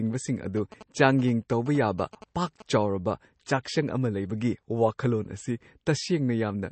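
Throughout the clip the audio sounds watery and swirly, with nothing above 8.3 kHz, and the damage is plainly audible. This is likely MP3 compression at a low bitrate, around 32 kbps, where the encoder drops weak frequency lines frame to frame and cuts the treble.

From 0.57 to 2.62 s, GSM signalling bursts are audible: a galloping dit-dit-dit of short buzzes at about 217 Hz, roughly 15 dB below the speech. A nearby 2G phone transmitting in groups of bursts is rectified by the audio circuit and turned into this buzz.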